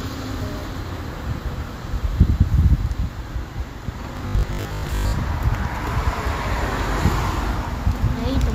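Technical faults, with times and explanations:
4.17 to 5.21 s, robotic sound from repeated short buffers: a fixed 50 Hz metallic buzz, which fits a 20 ms chunk likely replayed in place of about half the audio, not silent dropouts.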